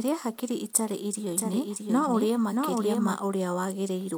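From 1.29 s, just after "hakiri itarĩ", a second copy of the speech trails the original by roughly 0.7 s, a few dB quieter, dry and full-band, until it cuts off abruptly at 3.17 s. This doubled audio track is likely from a slower capture path mixing the same signal in again.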